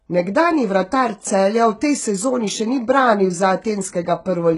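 Right from the start and all the way through, the speech carries heavy HE-AAC compression damage, likely from a very low-bitrate encode, something around 12 kbps. The top end stops dead at 11 kHz. The treble below that is rebuilt by spectral band replication: lower bands copied upward and roughly shaped, so it isn't the real thing. You hear it on the s sounds, which come out gritty, metallic and a bit lispy.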